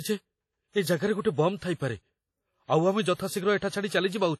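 WMA compression runs through the whole of this short speech recording: the sound is washy and ringing, with a hiss that swells and fades along with the voice, and nothing at all comes through above 14.4 kHz. The damage is heavy, which points to a low bitrate, around 32 kbps, in an early WMA encoder whose long transform blocks spread quantisation noise over tens of milliseconds and drop the weaker spectral detail entirely. That is the likely cause. Pre-echo is audible from 3.58 to 3.62 s, where a sharp attack is preceded by about 39 ms of hiss and arrives softened and smeared. Because the codec spreads its quantisation noise evenly across a whole block, the noise sized for the loud onset also fills the quiet stretch just before it.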